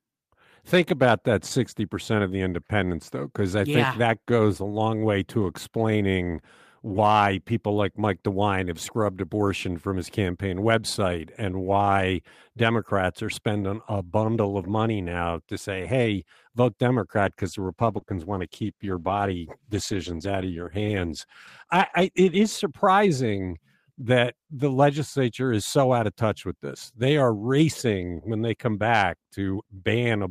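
A call bitrate drop runs from 17.22 to 22.61 s. The estimated bandwidth fell, so the Opus encoder coded far more coarsely, consistent with a fall from around 32 to 15 kbps. The speech turns rough and duller, losing high-frequency detail until quality recovers.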